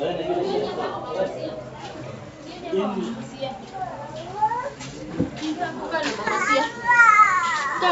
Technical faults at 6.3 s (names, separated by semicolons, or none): bit errors on an ADPCM link